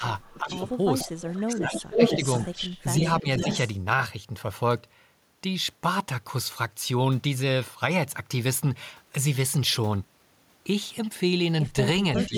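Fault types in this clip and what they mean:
Echo leak: A delayed copy of the speech returns about half a second late, at 0.49 to 0.53 s, roughly 5 dB below the talker and near equal level at the end. This is likely a loudspeaker echo that got past the canceller. Unlike room reverb, it is a distinct repeat, not a smeared tail.
Speech suppressed in double talk: The talker's level dips by about 10 to 15 dB in short stretches, from about 70 ms up to half a second, while the echo is also present. This likely comes from the canceller turning down both signals at once. Unlike a dropout, the sound sinks rather than stopping.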